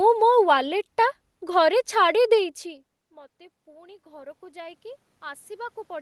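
Speech, where automatic gain rising sets in from 2.38 s to the end: after the talker moves back and the level drops by about 24 dB, voice and room noise swell together, which a talker coming closer would not cause.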